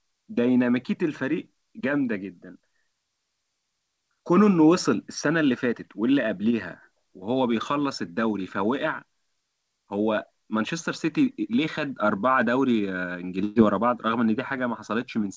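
Speech carried over a call link, audible as band-limited with nothing above 8 kHz, consistent with G.722 at 64 kbps, suffers a burst of packet loss from 13.44 to 13.58 s. Roughly 120 ms of audio never arrived in time, so the receiver stretched the last received sound across the gap for about 118 ms, letting it fade as a held buzz or hiss before the speech jumps ahead with that stretch missing.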